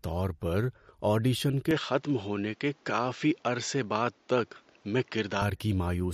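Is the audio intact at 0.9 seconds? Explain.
No. At 0.9 s the speech carries the same damage heard throughout the clip, most likely MP3 compression. Nothing remains above 13.9 kHz, where the encoder has cut the treble to save bits, and weak frequency components drop in and out from frame to frame. The result is a plainly audible watery, swirly texture with smeared attacks and metallic chirps on s sounds, which fits a low bitrate of around 48 kbps.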